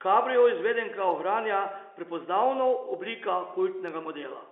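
No technical faults are audible.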